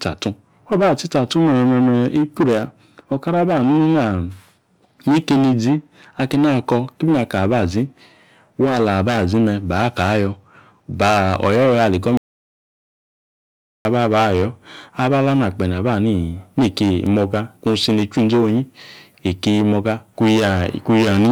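The input was likely lost and silence written, an audio dropout to silence from 12.17 to 13.85 s, cutting speech for 1.68 s into dead, roomless silence.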